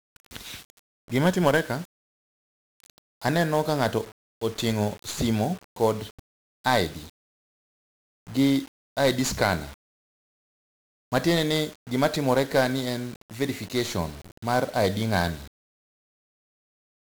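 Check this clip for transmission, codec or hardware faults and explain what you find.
The speech has been through 1-bit DFPWM compression for its whole length. Each sample is reduced to a single up-or-down step, the heavy damage you'd expect near 48 kbps, so strong broadband quantisation noise rides on everything: the speech turns fuzzy and crackly, and its treble sinks into hiss.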